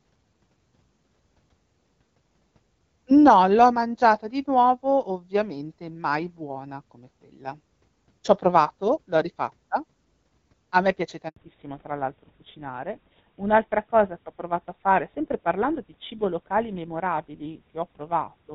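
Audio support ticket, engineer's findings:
Speech drops to dead silence for 80 ms at 11.28 s, right after "a me piace". Handover gap: no speech frames arrived while the call switched networks.

From 11.36 s to the end, the voice sounds duller and rougher, with nothing above 4 kHz. Fallback to narrowband: HD Voice wideband gave way to a narrowband codec, consistent with GSM full rate.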